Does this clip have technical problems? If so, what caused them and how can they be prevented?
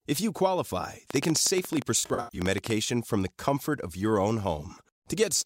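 Yes. A train of clicks runs from 1.1 to 2.7 s, just after "you qualify." About twenty sharp pulses arrive irregularly, roughly 14 per second, peaking about 15 dB above the signal. On a waveform they show as thin vertical spikes; on a spectrogram, as full-height vertical lines. They are likely caused by electrical interference or a faulty connection or power supply. Shielding cables, moving away from nearby equipment and using a stable interface would prevent them.

AAC frame loss with concealment hits between 1.99 and 2.39 s. About 256 ms of audio went missing, scattered over 384 ms, with the longest gap near 100 ms. The decoder patched these gaps from the last good spectrum, producing smeared, noisy, phasey stretches. A spectrogram shows blurred, blocky patches with lost harmonic detail. A more reliable transmission path, with error protection or retransmission, would prevent this.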